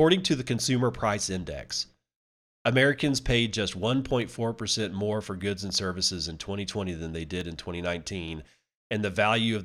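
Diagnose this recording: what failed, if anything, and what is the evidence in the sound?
Two sharp, isolated clicks in the speech, at 4.22 s just after "paid just" and at 7.41 s just after "than they", are dropped samples. Each is a single tick with no gap in the sound, showing as a thin vertical line across the spectrum. The waveform skips forward by a fraction of a millisecond, so it jumps straight to a later value. The stage is likely the driver or buffer, where brief underruns can discard a handful of samples.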